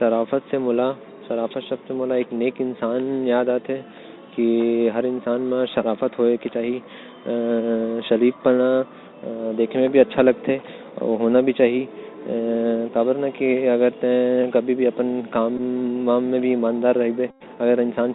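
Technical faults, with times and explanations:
throughout: Bluetooth CVSD headset codec. Nothing above 4 kHz survives. S sounds turn scratchy over a granular hiss, which fits 64 kbps CVSD.
15.57–15.60 s and 17.31–17.43 s: Bluetooth headset packet repeated. Lost packets were replaced by re-decoding the previous one. Repeating every 3.75 ms buzzes near 267 Hz, briefly at first, then for about 97.5 ms.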